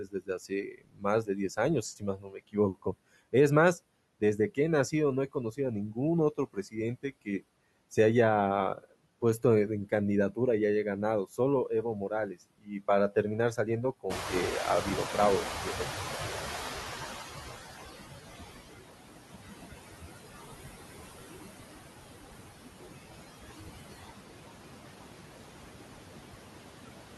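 A speech recording in which noise suppressor artifacts run the whole way through. The suppressor pulls the steady background down by about 19 dB, dipping between phrases and swelling back under them. On a spectrogram the gaps between phrases show patchy, speckled residue instead of an even noise floor, with isolated time-frequency cells flickering on and off. Speech cut by the noise suppressor occurs where the processor mistakes parts of the voice for noise and turns them down along with the background. This happens at 0.0–1.58 s (dips of about 21 dB, roughly 0.7 s of speech affected), 1.97–2.94 s (about 21 dB), 6.53–7.43 s (about 17 dB), 11.38–13.16 s (about 22 dB), 13.56–14.33 s (about 12 dB) and 15.44–15.87 s (about 12 dB). Consonants and word tails sound swallowed or faint. In the waveform the envelope collapses abruptly inside these spans, and the spectrogram shows the weaker speech energy, especially high-frequency consonant energy, punched out. 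Around 14 s the room noise jumps by about 18 dB, settling roughly 6 dB below the speech, and here the noise suppressor is catching up. From 14.09 s the louder noise passes through with less reduction because the noise estimate lags, and it only sinks by about 18 dB over some 3.84 s, until about 17.93 s. A spectrogram shows a bright band of broadband noise appearing at 14 s that gradually darkens across those seconds.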